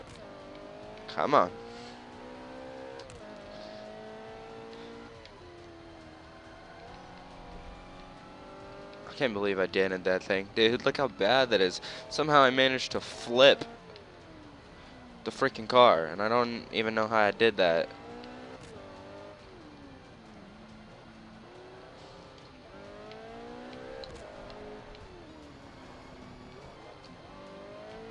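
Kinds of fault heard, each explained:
Wrong sample rate: From 25.29 to 26.76 s the sound runs about 9% fast and sits roughly one and a half semitones sharp, so it comes across as slightly rushed and raised in pitch. Speed and pitch shift together because the samples are clocked out faster than they were captured, with no rate conversion. That ratio of 1.09 fits audio recorded at 22 kHz being played back at 24 kHz.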